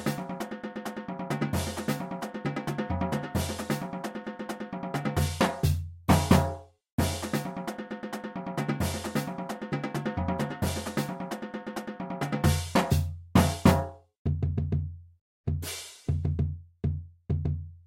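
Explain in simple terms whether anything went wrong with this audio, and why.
Nothing went wrong with this audio that a listener would notice. There are no dropouts, glitches or sudden changes at any point in the recording.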